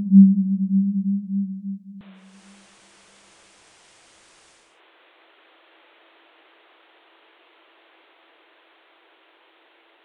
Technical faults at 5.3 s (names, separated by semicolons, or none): input switched to a poorer device